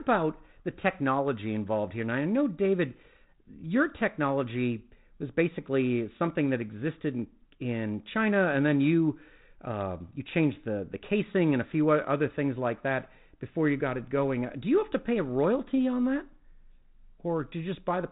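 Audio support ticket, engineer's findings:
No faults found in the speech. The G.726 path at 32 kbit/s is audible as light coding grain and a band limit, with nothing passing above about 3.8 kHz.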